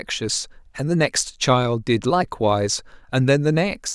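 Speech recording, no technical faults detected at any point.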